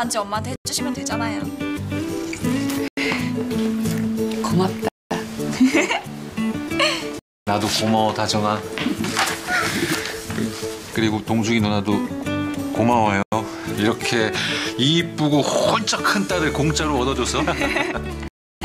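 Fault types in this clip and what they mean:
Block of digital silence: stretches of the sound drop straight to silence and return with no fade, leaving an audible hole. Three gaps, at 0.56, 2.88 and 13.23 s, last about 93 ms each, which fits a 4096-sample buffer the program failed to fill in time. Three longer gaps, at 4.88 to 5.11 s, 7.19 to 7.47 s and 18.28 to 18.61 s, run 224, 279 and 334 ms.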